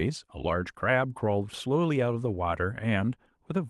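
No technical faults can be heard in the speech. It comes through a WebRTC call path, where the codec's coding leaves the top end rolling off around 12 kHz, consistent with Opus at a moderate call bitrate.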